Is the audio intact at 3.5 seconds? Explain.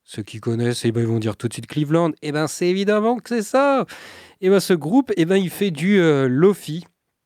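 Yes, the audio is intact at 3.5 seconds, with no audible fault at that point.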